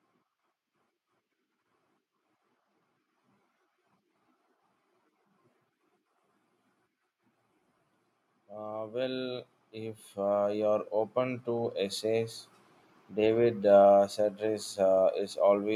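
A speech recording with automatic gain rising from 8.33 to 12.42 s. The gain control lifts the level by about 13 dB. Voice and background swell together.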